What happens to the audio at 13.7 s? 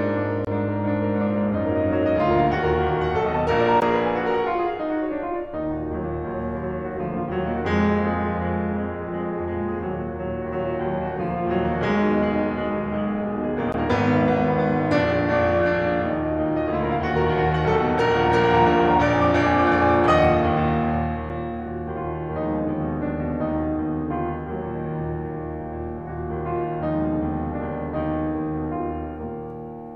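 At 13.72 s the music drops out into a block of digital silence about 16 ms long. A short run of samples is replaced by silence. The signal stops dead and restarts with no fade, so each edge jumps abruptly to and from silence. With a gap just over 15 ms, it comes across as a very short pop or hole rather than a plain tick.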